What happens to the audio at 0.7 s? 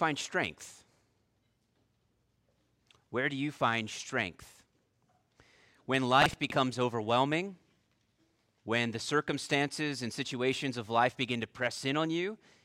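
Nothing goes wrong at 0.7 s; the audio is intact at that moment.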